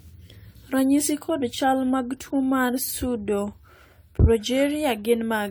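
Speech with generation loss all the way through: swirly, hollow and smeared, with soft attacks, most likely from around ten re-encodes, consistent with AAC-LC at roughly 96 kbit/s.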